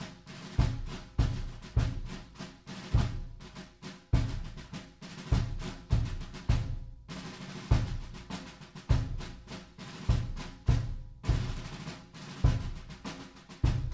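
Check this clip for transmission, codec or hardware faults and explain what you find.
Nothing faulty found: the audio is band-limited with nothing above 8 kHz, consistent with a normally working WebRTC call path using a wideband codec such as G.722.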